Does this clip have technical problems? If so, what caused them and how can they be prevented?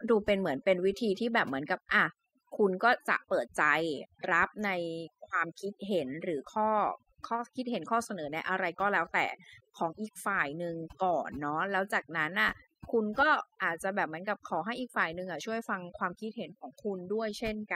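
Yes. Throughout the speech there is overdone noise removal: a noise reduction stage was pushed too hard, so any frequency band hovering near its noise estimate gets pulled right down, taking the quieter parts of the voice with it. That leaves a near-silent background speckled with twinkling, chirpy fragments. Unlike a noise gate, which shuts the whole signal on and off, this works band by band, so the artefacts flicker at different pitches even while speech continues. To prevent it, use a gentler reduction setting, or record in a quieter space so less noise needs removing.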